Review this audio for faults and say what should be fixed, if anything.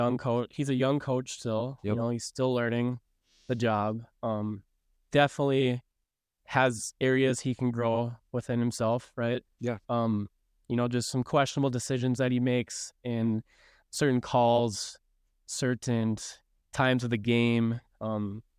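Nothing needs fixing, as the signal shows no audible technical faults anywhere in the recording.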